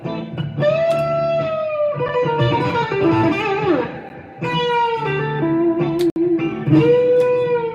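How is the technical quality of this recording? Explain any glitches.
The recording has three brief dropouts to silence. They come at 2.08 s, 4.09 s and from 6.10 to 6.16 s. Each is a gap between stream segments. The sound is split into 2-second segments, and their time stamps leave a small hole at each join. The player fills that hole with silence. The first two last only about 7 and 10 ms. The third lasts about 60 ms and is a hard-edged break. Nothing is lost from the audio itself.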